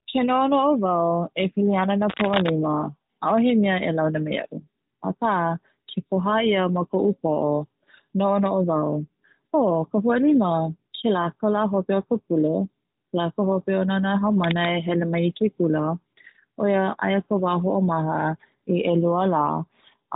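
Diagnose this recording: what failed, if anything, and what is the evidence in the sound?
Analogue wiring. Cable scratch noise at 2.09–2.5 s and 14.44–14.71 s, rustling nearly as loud as the speech. Likely a worn connector, its contact resistance jumping.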